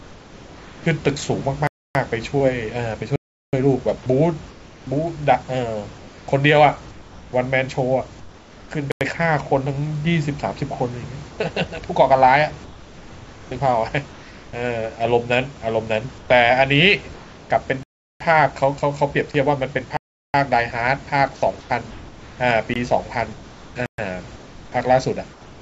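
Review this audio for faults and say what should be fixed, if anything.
Comfort noise in place of the background: in the pauses during 0.00–0.86, 4.51–8.71, 11.29–14.53, 16.18–17.50 and 21.61–25.62 s, the room tone turns into a flat, featureless hiss, about 3 dB quieter at the start. Discontinuous transmission likely stopped sending pauses, and the receiver synthesised replacement noise. To prevent it, disable DTX/comfort noise on the sender.

Block of digital silence: the sound drops abruptly to dead silence at 1.67–1.95, 3.16–3.53, 8.92–9.01, 17.83–18.20, 19.97–20.34, 22.74–22.76 and 23.86–23.98 s. The holes last 20 to 372 ms. The longest fit a 16384-sample buffer left unfilled, so the output was zeroed. To prevent it, ensure the audio callback always fills its buffer on time.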